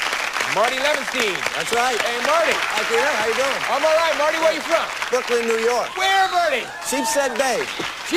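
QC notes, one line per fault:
Throughout, crude rate conversion: samples were repeated rather than filtered, consistent with a move from 44.1 kHz to 48 kHz, so the waveform shows tiny stair-steps where values are duplicated. The timing error recurs in a fixed pattern and adds inharmonic tones roughly 20 dB below the signal, heard as a gritty fizz riding on louder, brighter passages. A spectrogram shows spurious lines and haze that do not follow the harmonic structure.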